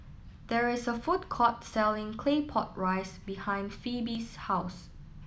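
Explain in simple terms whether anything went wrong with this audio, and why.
The speech skips forward at 0.34, 1.24, 2.25 and 4.15 seconds. Each is likely a dropped buffer (overrun): the recorder lost a short chunk, roughly 20 ms at first and less later, and joined the edges directly with no silence.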